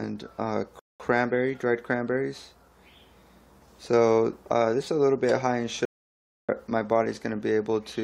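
At 0.79 s the sound drops into silence for about 0.2 s, then picks up exactly where it broke off: a rebuffering stall, where the player exhausted its downloaded audio and waited for more. At 5.85 s the output goes silent again for about 0.64 s before continuing, a playback stall most likely caused by the player running dry of data or its thread being blocked.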